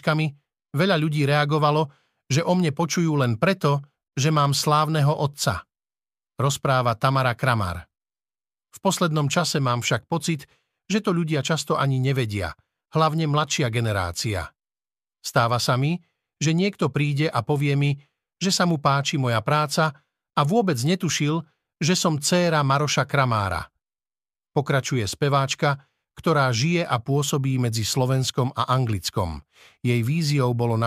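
Nothing in the speech stood out as a technical problem on listening.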